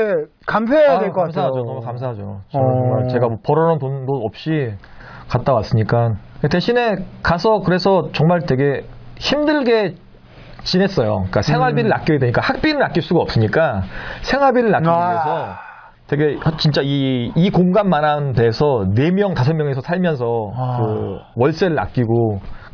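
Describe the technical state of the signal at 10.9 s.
At 10.9 s the signal is intact, with no audible fault at that point.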